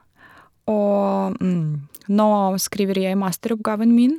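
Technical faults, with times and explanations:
Nothing stood out as a technical fault on listening to this speech clip.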